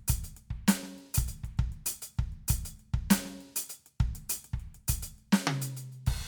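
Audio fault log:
No audible faults detected.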